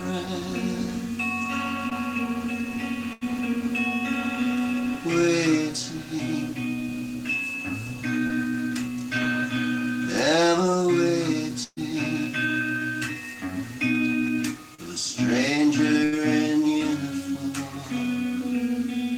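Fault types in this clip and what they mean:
Short concealed packet loss: at 1.89, 8.27 and 14.75 s a few hundredths of a second of the stream arrived too late to decode, 20 ms in the first two and 40 ms in the third. The receiver covered each hole by carrying the preceding sound forward for about 15, 25 and 36 ms before blending back into the real audio, so each spot comes through as a brief smear or wobble rather than a clean dropout.
Burst of packet loss: at 3.13, 11.63 and 16.04 s a run of audio was lost in one go, 80 ms at the first and last and 140 ms at 11.63 s. The receiver kept extending the last sound while fading it, for 81, 132 and 80 ms, so a held buzz or thinning hiss sits where audio should be. At 11.63 s it decays to about 40 ms of silence before the sound resumes further on.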